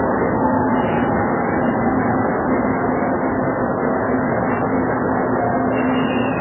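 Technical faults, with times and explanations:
Throughout, MP3 compression: no sound above 3 kHz and a watery swirl, likely a bitrate near 8 kbps forcing the encoder to drop treble and weak lines.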